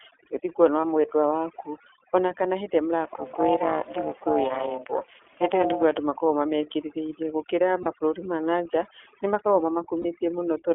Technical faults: overdone noise removal; iLBC codec; lost iLBC frames; overlap-add ripple

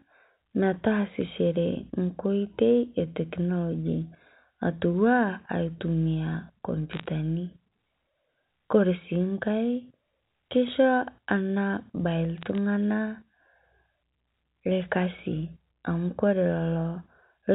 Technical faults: bit errors on a digital phone line

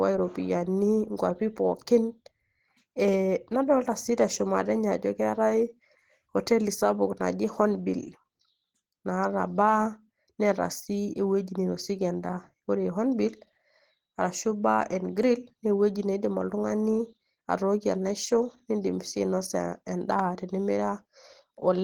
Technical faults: Opus compression

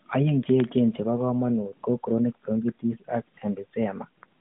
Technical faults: none

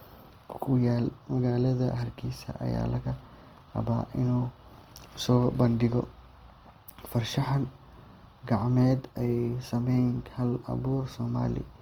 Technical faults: Opus compression

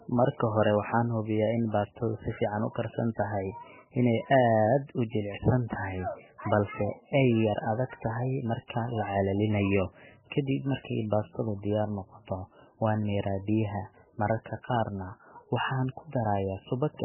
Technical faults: MP3 compression

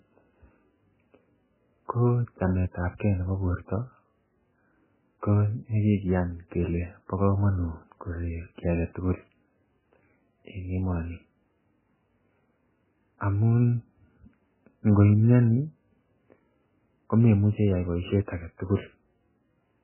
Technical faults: MP3 compression

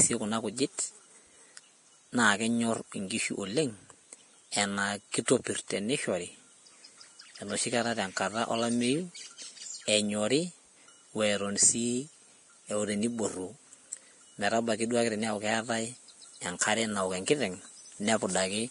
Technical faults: Vorbis compression

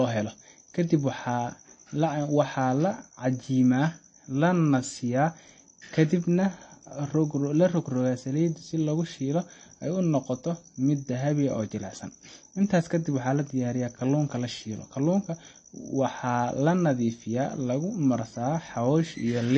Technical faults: MP3 compression

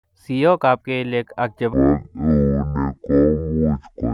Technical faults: section at the wrong speed

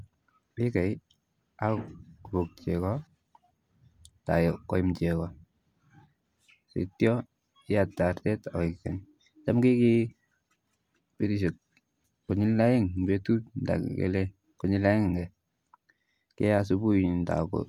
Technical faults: none

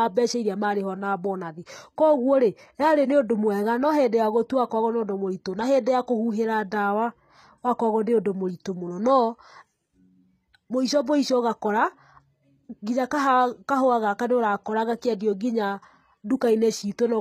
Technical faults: HE-AAC compression

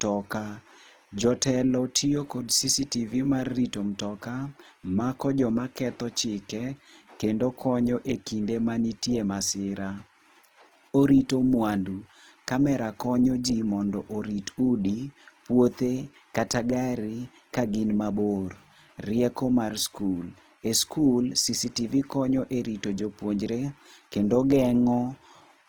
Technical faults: Opus compression

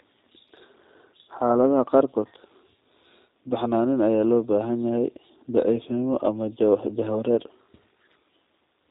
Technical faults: G.729 codec

